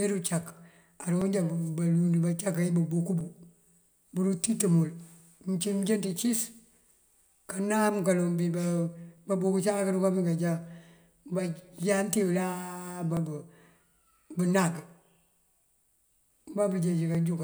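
Clock drift buffer slips, 1.2 s to 17.1 s: about ten clicks, one every 1.99 s, likely mismatched clocks dropping or repeating around 50 samples.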